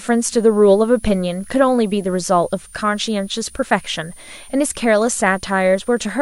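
Speech runs with a switching supply whistle underneath from start to finish. A thin high tone wanders between about 8.73 and 9.94 kHz, roughly 25 dB below the speech. A switching power supply is running in an audible burst mode or beating with another one.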